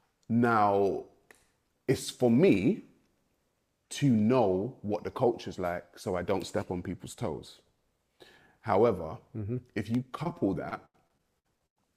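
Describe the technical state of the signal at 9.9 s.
At 9.9 s a single loud pop sits on the signal, running from about 9.95 to 9.97 s. It is one sharp, brief click, a few decibels louder than the surrounding sound. The sound carries on beneath it without a break. The cause is likely a sudden voltage step or spike, such as from a switch, a plug or a static discharge. That pulse was added to the signal and shaped by the circuits after it.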